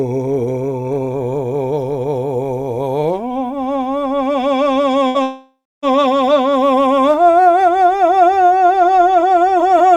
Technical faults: burst of packet loss; long network dropout

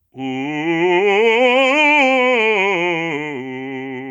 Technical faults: gain pumping

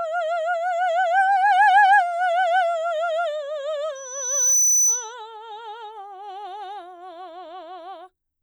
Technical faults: loudspeaker feedback squeal

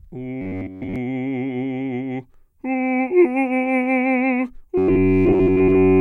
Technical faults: robotic sound from repeated short buffers

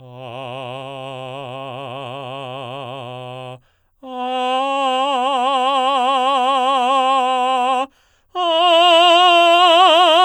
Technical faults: none

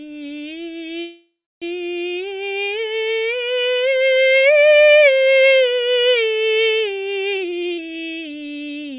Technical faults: call audio freeze; jitter buffer speed-up

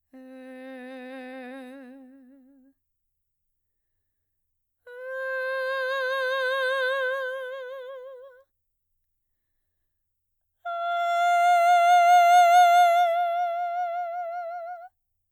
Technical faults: none

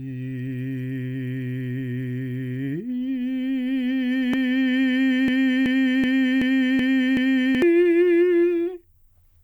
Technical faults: broken-record loop

